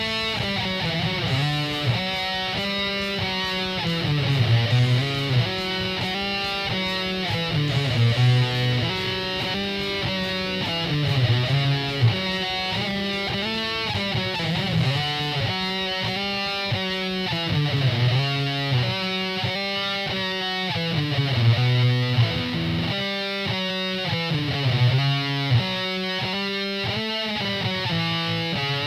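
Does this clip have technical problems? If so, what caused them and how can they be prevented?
Yes. Throughout the clip, quiet passages turn gritty and grainy, with the quietest moments sputtering or dropping out. The likely cause is low bit depth without dither: truncation to something like 8 bits leaves error roughly 35 dB below the signal that tracks the sound. A waveform shows visible staircase steps at low levels, and a spectrogram shows signal-dependent hash rather than a steady noise floor. Keep higher bit depth and apply dither whenever reducing word length.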